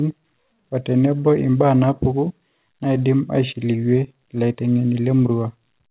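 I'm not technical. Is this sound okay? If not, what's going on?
Yes, nothing is wrong with this speech recording.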